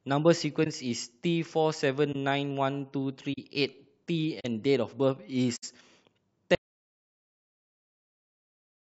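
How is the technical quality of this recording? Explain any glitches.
The technical quality is rough, with two kinds of damage in this speech recording.

There are five instances of corrupt frame concealment, at 0.64 s, 2.12 s, 3.33 s, 4.40 s and 5.56 s. Each lasts from 30 to 82 ms, which fits one damaged AAC frame for the first two and about three for the rest. The decoder detected the bad data and covered it itself.

From 6.55 s to the end there's an audio dropout to silence: silence with no room tone at all. That's likely the input dropping out while the recorder kept writing, and whatever was said after that point is lost.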